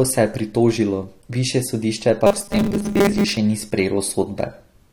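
Audio likely arrived at the playback software too seldom between 2.27 and 3.37 s, just after "pritožilo višje sodišče", and the gaps were filled by looping a short stretch of about 5 ms while roughly half of the real speech was skipped. The result in this speech clip is robotic sound from repeated short buffers: that loop imposes a fixed 200 Hz buzz, so the voice turns rigid and metallic, still loosely tracking the words.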